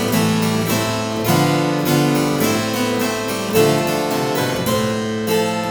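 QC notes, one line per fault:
No faults found on this pass; nothing to log.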